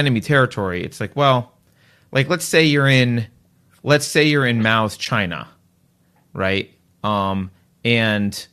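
At 5.05 s there is a short AAC frame loss with muting. About 10 ms of sound, consistent with a single lost frame, drops out. The decoder zeroes that frame's spectrum, and the overlapping windows fade the sound down and back up, leaving a brief soft-edged gap under the light coloration of what is likely low-delay AAC.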